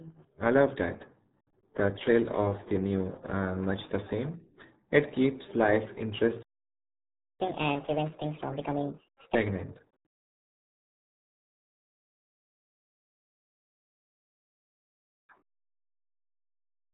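RealAudio 14.4 codec damage runs throughout. This 8 kbit/s speech codec passes nothing above 3.8 kHz, so the speech sounds muffled and gargly. At 6.42 s, just after "keeps life", a playback stall cuts the sound for 0.97 s, likely because the player ran out of data. Catch-up at higher speed follows from 7.41 to 9.35 s: the backlog is resampled to 1.5 times speed, raising the pitch by roughly seven semitones. A milder catch-up from 13.64 to 16.64 s runs at 1.15 times speed, about two semitones higher.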